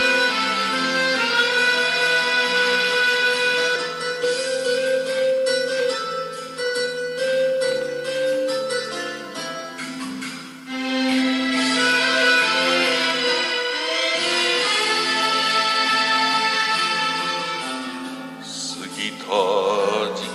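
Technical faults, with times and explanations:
3.75 s, skip ahead: the sound jumps straight forward, with around 0.4 s of material missing and the two sides butted together with no silence or fill in between. A stretch of audio was discarded while later audio was already waiting, so playback resumed further along rather than pausing. Unlike a dropout, where the gap is heard as silence or concealment noise, the timeline here simply closes up, so the only clue is the abrupt discontinuity in content.
4.23 to 5.86 s, jitter buffer speed-up: for this stretch the sound runs about 4 percent fast while its pitch stays unchanged. The receiver was holding more audio than it wanted and trimmed it back by cutting out short pitch-period-sized slices many times in succession, roughly 70 ms in total. Unlike a resampling speed error, nothing shifts upward in pitch, and unlike the skip at 3.75 s, no single jump is audible.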